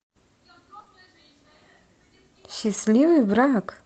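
A brief smear and wobble runs from 0.79 to 0.87 s, where two back-to-back stretches of about 20 ms each never arrived. This is short concealed packet loss: the receiver stretched the preceding sound to cover each hole, then blended back into the real signal.

From 2.65 to 2.79 s the audio turns rougher and noisier without any gap. This is a lost packet rebuilt from error correction. Each missing piece was replayed from a low-bitrate copy carried in the following packet, about 80 ms in all, which fits several lost frames. The Opus call path's cut-off near 8 kHz is present throughout.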